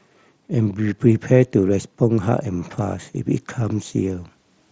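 Nothing goes wrong technically anywhere in this speech.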